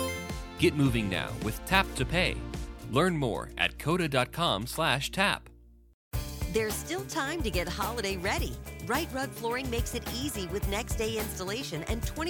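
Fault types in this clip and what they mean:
No fault types can be heard in this clip.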